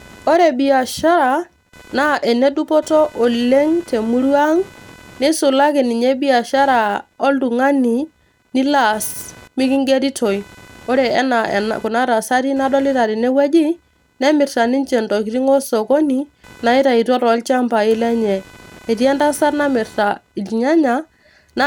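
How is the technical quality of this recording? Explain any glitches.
The speech recording is marred by one fault. Computer activity noise runs throughout. A faint buzz, pulsing around 500 times per second, sits roughly 30 dB below the speech. Processor or graphics load shifts the shared ground. It tracks the computer's activity, not the voice.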